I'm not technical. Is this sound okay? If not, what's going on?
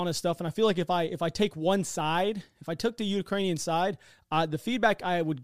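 No. An electrical switching spike at 3.56 s adds a sharp snap over the speech. It is likely caused by a nearby switch, motor or static discharge making a brief electrical arc that leaked into the audio line.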